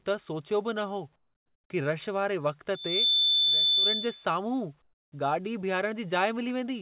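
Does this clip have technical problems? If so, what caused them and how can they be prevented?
Yes. From 1.16 to 1.7 s and again from 4.82 to 5.12 s, the background drops out and is replaced by a flat, featureless hiss, about 15 to 16 dB quieter than the real room sound. This is likely comfort noise in place of the background: during pauses the sending end stops transmitting, and the receiver fills the gap with synthetic noise that only roughly matches the room. Turning off discontinuous transmission on the sending side prevents it.

From 2.74 to 4.26 s a pure tone at 3.5 kHz swells up over about a third of a second and then holds, well above the speech level. This is a loudspeaker feedback squeal: a microphone was picking up a loudspeaker it was feeding, and at 3.5 kHz the loop gain exceeded one, so that frequency kept reinforcing itself. The squeal stands out even though the call path removes everything above 4 kHz, which fits a G.711 A-law link at 64 kbps. 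Headphones, echo cancellation, or more distance between microphone and speaker prevent it.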